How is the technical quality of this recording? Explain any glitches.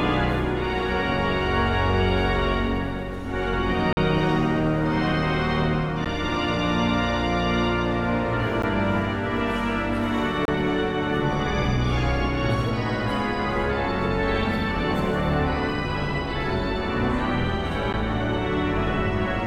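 The recording has five dropouts, each a block of digital silence.

The two longest run from 3.93 to 3.97 s (about 43 ms) and from 10.45 to 10.48 s (about 28 ms). Three shorter ones, each about 11.6 ms, fall at 6.05, 8.62 and 17.93 s. That shorter length fits a 512-sample audio buffer that was not filled in time, so the output was padded with zeros.

The sound cuts out and returns with no fade. The longer gaps sound like brief holes, and the short ones sound like ticks. On a waveform, each dropout appears as a flat line at zero. On a spectrogram, it appears as a narrow vertical blank strip.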